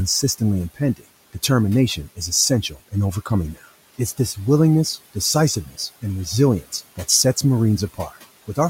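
At 5.66 to 5.79 s there's speech cut by the noise suppressor. It mistook a soft bit of speech for background and pulled it down by about 11 dB, so roughly a tenth of a second sounds swallowed, sinking toward the room noise about 20 dB below.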